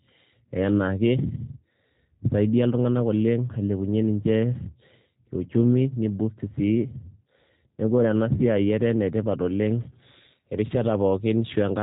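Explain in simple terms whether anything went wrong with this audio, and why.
Yes: the whole clip carries G.729 codec damage. The speech sounds thin, rough and slightly robotic because it is rebuilt from a model, not simply muffled like plain filtering.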